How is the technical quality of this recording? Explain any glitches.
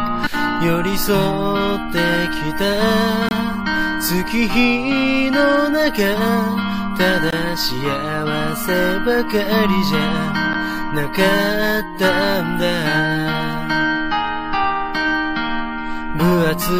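Two short dropouts break the recording, both a gap between stream segments. The first runs from 3.29 to 3.31 s, about 25 ms; the second from 7.30 to 7.33 s, about 22 ms. Their spacing fits 4-second segments whose timestamps leave a small hole at the join, which the player pads with silence. Nothing is lost, so the sound simply stops and resumes with hard edges. A waveform shows a flat-line notch; a spectrogram shows a thin vertical blank band across all frequencies.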